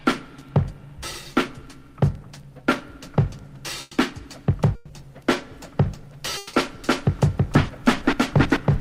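At 3.81 s and again at 4.75 s there are bursts of packet loss, lasting 0.10 s and 0.14 s. In each, a short run of audio never arrived, and the receiver stretched the last sound into a brief fading buzz or hiss before jumping ahead past the missing part. The bridged gaps are short and end in a skip rather than in silence.

From 6.37 to 6.55 s comes a longer gap of 0.16 s, also bridged by a held, decaying continuation before the audio picks up further on with a piece missing. The greater length points to a long network dropout as the likely cause, though the fill never fades to silence or a low floor.

From 6.84 s to the end, a doubled audio track appears: a second full-band copy starts abruptly, roughly as loud as the original and trailing it by about a third of a second. It is likely a second capture path or an out-of-step edit. Unlike a room echo, it carries no decay or reverberant colour, only the same sound again, delayed.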